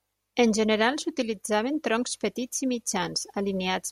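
Speech with no audible faults.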